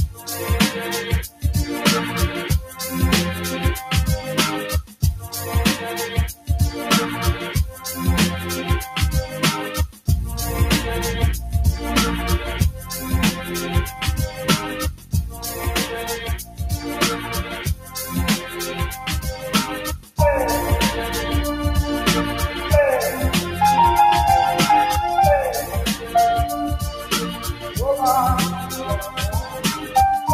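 A noise suppressor built for speech was left running on this non-speech audio. It treats sustained tones, ambience and decays as noise to be removed, so its gain swings by around 10 dB through the whole clip. Onsets mostly come through while anything held or fading gets pulled down, giving the sound a pumping, fluttering, thinned-out character. The suppressor also cut specific passages harder than the surrounding material, sinking the level and clipping decays short. Brief dips of a fifth of a second or less occur at 0.09–0.28 s (about 8 dB down), 1.28–1.44 s (about 11 dB), 4.83–5.03 s (about 13 dB), 6.33–6.49 s (about 12 dB) and 9.89–10.08 s (about 13 dB). Longer stretches at 13.9–20.19 s (up to about 13 dB) and 25.63–29.96 s (up to about 10 dB) lose level intermittently for a few seconds in total, wherever the sound sustains rather than strikes.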